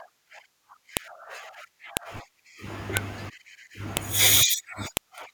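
File header played as audio at 0.97, 1.97, 2.97, 3.97 and 4.97 s: the speech was joined from 1-second pieces whose WAV headers were left in, so each header's bytes play as samples and produce a sharp, loud click at every join.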